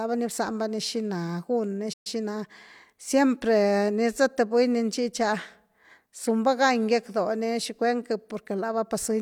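Just after "gun ni", at 1.93 s, the speech cuts out and the output falls silent until 2.07 s. This is a playback stall, with a gap of about 122 ms. It likely happened because the player ran short of buffered data or its output thread was held up. On a waveform it shows as a flat line with abrupt edges. On a spectrogram it is a blank vertical band across every frequency.

From 2.07 s to 2.55 s comes time-compressed catch-up. The player makes up the lost time by removing short slices of audio and cross-fading the joins, so the speech runs at about 1.25 times normal speed while its pitch stays the same. It sounds hurried. On a spectrogram the harmonics keep their spacing but syllables crowd closer together, and small smeared seams may appear where slices were spliced.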